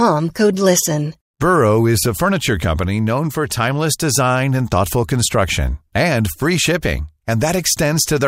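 At 5.57 s, just after "timeless design and thoughtful" and before "and free", weak digital radio reception lets a small scatter of bit errors, well under a tenth of a percent, slip past the error correction into the MP2 audio data. Corrupted samples put short blips of noise into single sub-bands, and corrupted scale factors make individual sub-bands leap in level for up to a frame, which sounds like a few MP2 frames being hit. The result is DAB burbling: a few brief watery blips laid over the speech.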